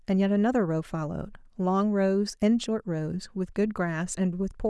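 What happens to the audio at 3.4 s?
Nothing goes wrong at 3.4 s; the speech carries on intact through that moment with no audible fault.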